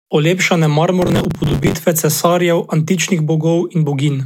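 Speech, with a burst of processor overload crackle from 1.02 s to 1.74 s, ending just before "cesarjev antičnih". For that stretch a gritty, tearing crackle rides on the voice as the processor repeatedly misses its buffer deadlines. Each miss replays a scrap of old audio with hard edges, and the texture fits buffers of around 10 ms failing again and again over a short stretch, roughly thirty times, until the load clears.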